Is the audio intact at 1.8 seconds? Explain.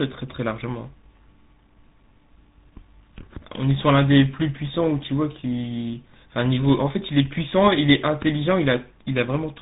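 No. Tandem speech coding affects the whole clip, including 1.8 s. GSM-coded speech was re-coded with G.726, compounding losses. It sounds rough, muffled and warbly, with nothing above 3.8 kHz.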